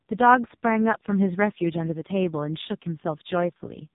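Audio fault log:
Throughout: AMR narrowband mobile codec. Nothing above 3.8 kHz survives, so the speech sounds thin and phone-like. The damage is heavy. Voiced sounds turn buzzy and synthetic because the vocal-tract model gets very few pulses. This fits AMR-NB's lowest 4.75 kbps mode.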